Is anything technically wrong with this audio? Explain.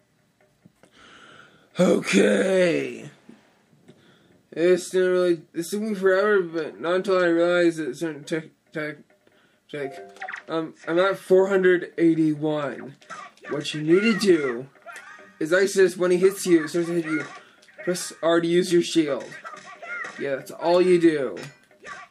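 No, nothing in this audio points to a technical fault.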